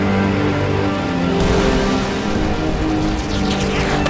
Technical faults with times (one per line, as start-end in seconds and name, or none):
none